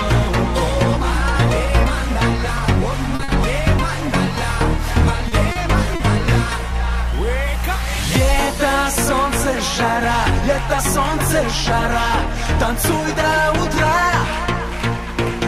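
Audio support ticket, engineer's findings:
Short concealed packet loss at 3.15–3.22, 5.52–5.59 and 5.96–6.03 s: 40 ms missing each time, decoder concealment extends the last sound, brief smear.

Short stall from a late packet at 3.23–3.31 and 5.29–5.35 s: jitter buffer ran dry, last sound held 50 ms then 30 ms, nothing lost.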